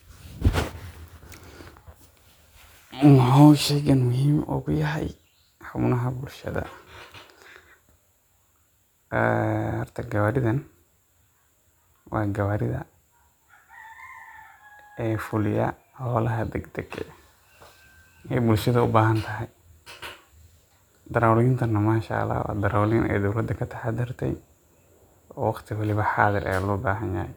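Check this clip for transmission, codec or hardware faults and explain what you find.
No faults detected.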